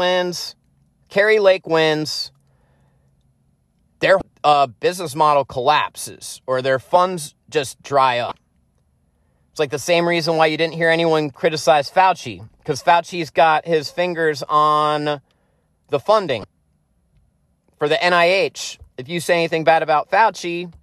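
Damaged data in a compressed stream makes the decoder misread frames in this speech clip, lose sync and hunt for the next header. That produces short glitches at 4.18–4.22 s before "uh business model collapses", 8.28–8.32 s after "their funds just dry", and 16.41–16.44 s.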